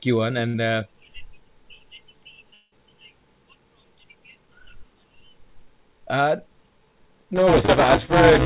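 Just after "you one", at 0.48 s, a burst of packet loss leaves a gap of about 60 ms, filled by a brief held buzz or hiss that fades before the speech resumes further on. It is shorter than a dropout and never reaches true silence.

From 2.54 to 2.74 s the sound stretches into a fading buzz or hiss filling roughly 180 ms and ending in about 40 ms of silence, before the speech returns with a stretch missing. That silent tail, which a burst never reaches, points to a likely long network dropout.

From 7.36 s to the end, buffer tearing adds a steady robotic buzz at 188 Hz, which fits a 256-sample buffer. Roughly a third of each period repeats audio from about 10 ms earlier. The buzz runs continuously rather than as an isolated gap.

Inside that stretch, at 7.66 to 7.70 s, a short concealed packet loss covers about 20 ms with a quick smear lasting roughly 26 ms before blending back. This brief wobble stands apart from the continuous rattle around it. 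Across the clip, the G.711 call path leaves nothing above 4 kHz.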